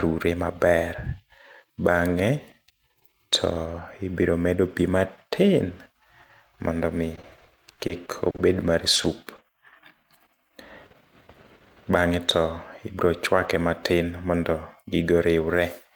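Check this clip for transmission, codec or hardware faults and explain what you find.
Transmission faults appear between roughly 7 and 9.4 seconds: a burst of repeated packet loss, a brief late-packet stall, and two short concealed losses.

Repeated packet loss (robotic sound) runs from 7.15 to 8.50 s. Around nine small holes open in quick succession, the longest about 40 ms. The receiver papers over each by extending the preceding sound, so about 17 percent of that stretch is synthetic fill and about 100 ms of real audio is gone. It sounds choppy, with fragments dropped.

A short stall from a late packet occurs at 8.96 to 9.00 s. The jitter buffer ran dry waiting on a packet delayed by about 20 ms, so the decoder held the last sound for 20 ms and then resumed exactly where it left off. Nothing is lost, but there is a brief held, slightly buzzy moment.

Short concealed packet loss follows at 9.02 to 9.06 s and again at 9.36 to 9.40 s. 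Each time, 20 ms never arrived in time and was replaced by a continuation of the prior sound, then blended back into the real signal. Each is heard as a quick smear or wobble, with that sliver of audio missing.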